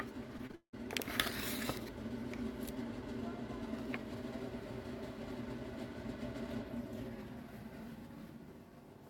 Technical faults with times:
0.37-0.75 repeated packet loss (robotic sound)

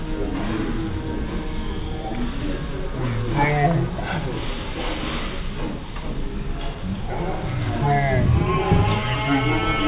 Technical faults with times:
0.00-9.87 wrong sample rate

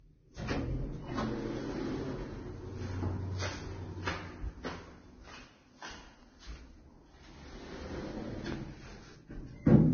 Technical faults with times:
0.00-9.93 transcoding between lossy codecs

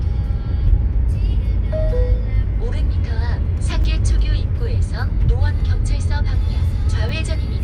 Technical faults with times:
1.33 compressed frames skipped
3.84 dropped buffer (overrun)
7.09 dropped buffer (overrun)

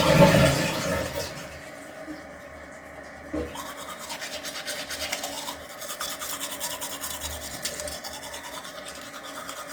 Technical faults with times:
0.00-9.73 Opus compression

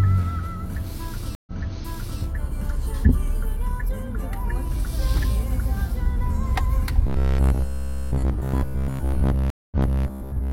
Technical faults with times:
1.35-2.21 stream reconnect
7.07-10.52 robotic sound from repeated short buffers
9.50-10.04 stream reconnect

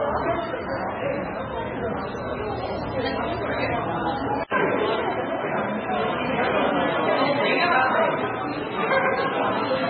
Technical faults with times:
0.00-9.89 MP3 compression
4.43-9.89 input switched to a poorer device

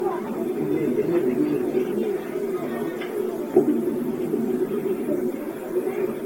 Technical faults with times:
0.00-6.25 generation loss

